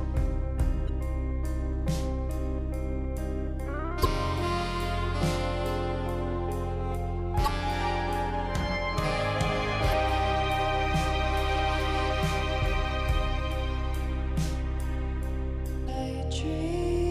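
Damaged data in a compressed stream hits five times: a brief blip at 0.88 s, then 4.01–4.06, 7.43–7.48, 9.89–9.93 and 15.85–15.89 s. Corrupted bytes trip the decoder, which loses sync and hunts for the next frame header, leaving short glitches in the audio.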